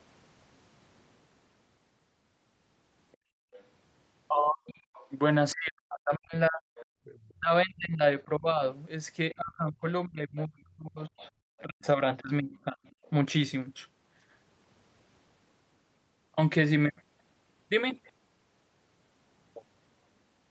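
Other side's voice leaking through first appears from 3.12 to 3.62 s and returns at 4.67 to 5.08 s, 6.76 to 7.19 s, 11.07 to 11.87 s and 12.9 to 13.1 s. A second, faint voice sits under the speech, somewhere around 25 to 35 dB below it, strongest near 7 s. This is likely the far end playing on the talker's loudspeaker and reaching the microphone, with the echo canceller leaving a residue behind instead of removing it fully.

Background gated by the echo canceller occurs from 3.17 to 3.53 s and again from 6.91 to 7.04 s, overlapping the first and third leaks. The room sound drops by about 29 dB and then about 33 dB, roughly 400 ms and 150 ms in all. The canceller detected loudspeaker output and clamped the microphone path hard, so the ambience briefly vanishes and then snaps back once the gate releases.

Speech suppressed in double talk runs from 4.48 to 12.87 s. The talker's own voice dips, thins and breaks into pieces for about four seconds in total, at worst falling by roughly 40 dB. 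The likely cause is both sides talking at once: unable to tell the near talker from the loudspeaker echo, the canceller attenuated everything together, taking the wanted speech down along with the echo it was chasing.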